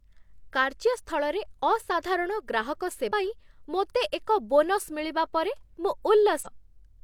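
A speech clip with compressed frames skipped at two points. At 3.07 to 3.11 s, between "କାର୍ଯ୍ୟ ସ୍ଥଳରେ ଅସାଧାରଣ ଗ୍ରାହକ" and "ପାଇଁ ମୋତେ ଏକ", roughly 200 ms of audio vanishes, about four frames. At 6.41 to 6.47 s, around 300 ms drops out, about seven frames. The jumps fit a frame length near 46 ms.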